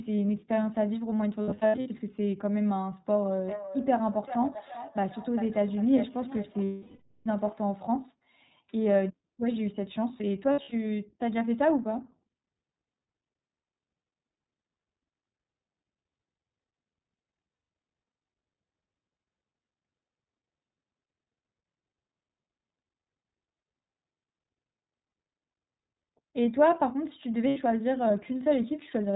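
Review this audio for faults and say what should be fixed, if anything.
iLBC codec, throughout: everything above 4 kHz is gone and the sound is rough and synthetic, because each short frame's excitation is coded independently. This fits 20 ms frames at 15.2 kbps.

Lost iLBC frames, at 1.42 to 1.88 s, 6.65 to 7.27 s, 10.52 to 10.74 s, 17.54 to 17.70 s and 27.48 to 27.59 s: each gap becomes a held, buzzy vowel as the decoder repeats the last pitch cycle with noise. The worst is about 620 ms of loss at 6.65 s. Clean sound returns almost immediately afterwards.

Feedback echo between two devices, 3.23 to 7.67 s: a second device in the room replays the call into the microphone. The sound returns roughly every 0.4 s, thinner and ringing, peaking about 12 dB below the main signal.

To prevent this, keep only one device joined per room and carry the call over a network path with less packet loss.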